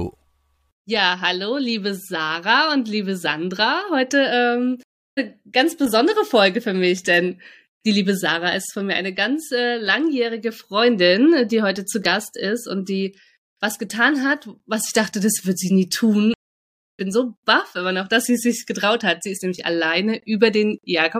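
At 4.83 s the speech cuts out for 338 ms, then resumes at 5.19 s roughly 0.4 s further on. It happens again from 16.34 s to 17.00 s, silent for 650 ms, skipping about 0.7 s. Each is a stream reconnect. The connection dropped, and a fresh decoder rejoined the live stream later.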